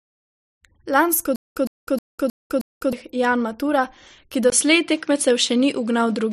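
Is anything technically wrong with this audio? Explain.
Yes, the speech has two faults.

From 1.36 s to 2.93 s there is a stutter with silent gaps. The player or stream most likely stalled, and on each retry it replayed the last buffered fragment before running dry. The result is a 113 ms burst of sound repeated five times at an even 314 ms pace, each followed by about 200 ms of dead digital silence. Whatever should have played during that stretch never arrives.

At 4.5 s the input likely switched to a poorer device, and it stays on it until the end. The capture jumped mid-recording to a lesser microphone or a headset call profile, marked by a brief 20 ms silence at the switch. From there nothing reaches above 11 kHz, so the speech turns duller and boxier. The level shifts by roughly 5 dB, and a new background noise floor sits only about 35 dB below the signal.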